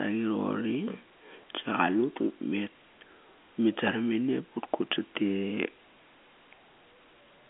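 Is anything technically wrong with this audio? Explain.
No, it's ordinary narrowband telephone speech with the G.711 telephone coding working as expected, the band running roughly 200 Hz to 3.4 kHz and nothing heard above about 3.7 kHz.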